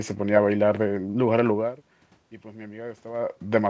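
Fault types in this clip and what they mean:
No faults to list here; the background noise of the room and the level drifting as the talker moves around 1.5 s and again near 3 s are just part of the recording, and the lack of anything above 8 kHz is simply what a G.722 call path does.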